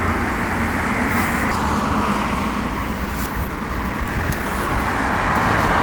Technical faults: skip ahead; jitter buffer speed-up

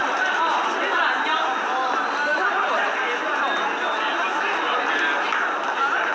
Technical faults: none

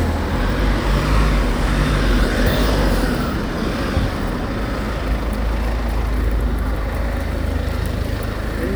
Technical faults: none

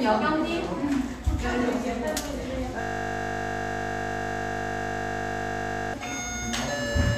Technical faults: system hang loop

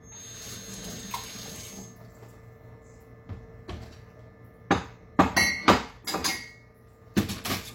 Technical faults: feedback whistle

